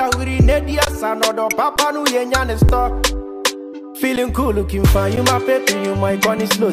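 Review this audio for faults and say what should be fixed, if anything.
Five underruns with held sample occur, at 0.85 to 0.87 s (a 20 ms gap) and at 1.76, 2.68, 4.16 and 5.16 s (about 10 ms each). Each time the output buffer ran dry and the converter froze on its last sample value, so the waveform flatlines and the sound drops out almost silently. A similar short stretch of incoming audio was discarded each time, so resumption lands on a discontinuity. Prevent this by enlarging the output buffer or raising the audio thread's scheduling priority.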